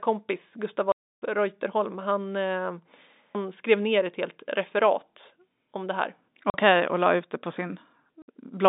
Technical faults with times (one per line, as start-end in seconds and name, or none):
0.92-1.22 packet loss filled with silence
6.50-6.54 packet loss filled with silence
8.22-8.28 packet loss filled with silence